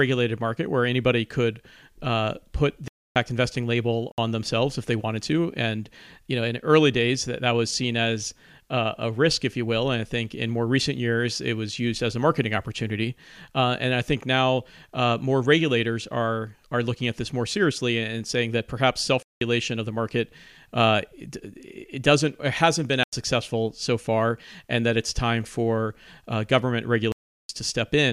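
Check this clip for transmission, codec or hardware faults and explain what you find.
Five blocks of digital silence show up: 2.88–3.16 s after "anybody could uh put", 4.12–4.18 s before "themselves if they wanted", 19.23–19.41 s, 23.03–23.13 s, and 27.12–27.49 s after "time for uh government". The output buffer likely wasn't filled in time, and the power-of-two lengths of the last three gaps fit buffer-sized chunks. Each is a hard-edged dropout, heard as a short hole in the speech.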